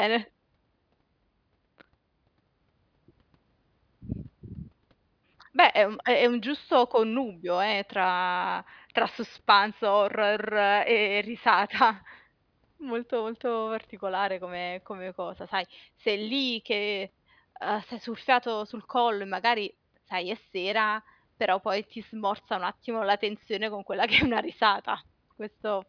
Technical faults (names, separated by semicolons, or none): none